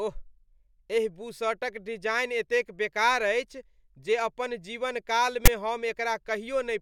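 At 5.46 s a 20 ms burst of harsh static cuts in with hard edges: file tags played as audio. A block of text tags was decoded as sample data, and the character bytes produce a loud, one-sided rasp rather than speech.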